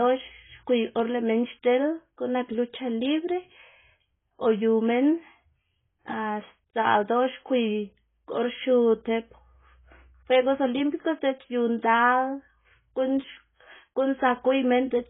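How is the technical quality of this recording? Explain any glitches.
Quality is poor from start to finish. The speech sounds dull and smeared, with nothing above 3.8 kHz. Sibilants and held sounds warble and fizz. The cause is likely heavy AAC compression, consistent with AAC-LC at a low bitrate around 16 kbps. Short of bits, the encoder discards the top of the spectrum. It quantises what remains coarsely, leaving gaps and artefacts.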